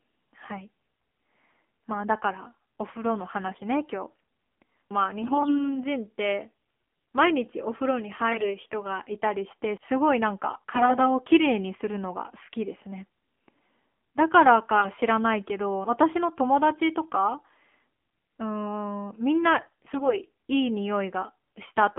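AMR narrowband mobile codec damage runs through the whole of the speech. The band is confined to 200 Hz to 3.4 kHz, and a plainly buzzy, synthetic edge comes from the pulse-driven vocal-tract model working with few bits, which fits a 7.4 kbps mode. AMR bit errors break in at 3.48–3.62 s, 5.22–5.80 s, 8.32–8.54 s, 10.54–11.11 s, 14.76–14.89 s and 19.58–20.18 s, where pitch and level hold but the voice turns hoarse, scratchy and gargly. Flipped bits in the weakly protected part of each frame, from a few percent up to around one in ten, misplace the excitation pulses and skew the gain and spectral values.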